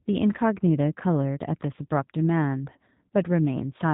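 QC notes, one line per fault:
throughout G.729 codec: plainly rough, slightly synthetic speech with nothing above 3.8 kHz. Each 10 ms frame is rebuilt from a vocal tract filter, a pitch predictor and a few pulses. That coarse model, consistent with an 8 kbit/s stream, produces the buzzy edge.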